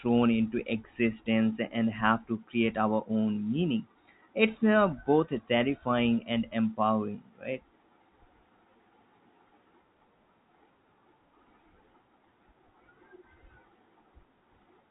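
No technical faults are audible.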